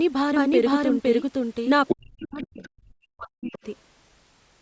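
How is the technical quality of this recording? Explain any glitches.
The recording has clear call-related faults: a doubled track at the start, then a stretch where the other side of the call bleeds in and the talker is pushed down.

Doubled audio track, 0.00 to 1.72 s, already under way when the clip opens: a second full-band copy, about as loud as the original, trails by roughly half a second. It is likely a second capture path or misaligned edit, giving a dry, abrupt repeat with no room colour.

Other side's voice leaking through, at 1.87 to 1.95 s, 2.19 to 2.46 s, 2.63 to 2.67 s and 3.53 to 3.58 s: loudspeaker sound, likely left behind by an incomplete echo canceller, surfaces in short scraps. The first is about as loud as the speech. The later ones are far quieter, down around 25 to 35 dB.

Speech suppressed in double talk, 1.93 to 3.65 s: with both sides talking, the canceller likely couldn't separate them and turned everything down. 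The talker's speech dips, by up to around 40 dB, across roughly one and a half seconds in pieces, within a band that stops at 8 kHz.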